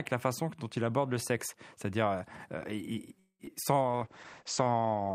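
A call audio freeze runs from 3.19 to 3.41 s. The speech stops moving forward and the last sound is stretched out, trailing into roughly 90 ms of silence, about 200 ms in all, before the talk picks up exactly where it left off, with nothing skipped. The likely cause is packets held up in transit, so the jitter buffer emptied and the receiver padded the wait. That adds a gap and delay rather than losing audio.

Short concealed packet loss follows twice, at 3.45 to 3.49 s and at 3.63 to 3.65 s. Each time about 20 ms of the call never reached the decoder, which covered the hole by extending the preceding sound and then blending back into the real signal. The first patch is a brief smear. The second is barely filled, and it also pulls back roughly 20 ms of the extra delay left by the freeze.

A call bitrate drop sets in at 3.83 s and lasts to the end of the clip. The encoder's rate falls from 64 kbps to 10 kbps and stays at the bottom for about 1.3 s. 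The coarser coding makes the speech rough and watery, and the audio bandwidth shrinks from 20 kHz to 8 kHz, so the top end is cut away and the sound turns muffled.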